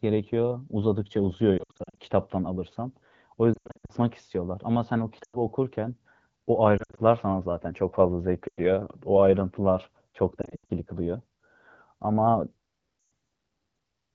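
Lost AMR speech frames: radio errors corrupt frames, so the wideband decoder repeats the last good settings at falling gain, giving brief warbles and quick drops to near silence at 1.57–1.98, 3.54–3.92, 5.23–5.37, 6.77–7.00, 8.48–8.59, 10.41–10.71 and 12.99–13.11 s.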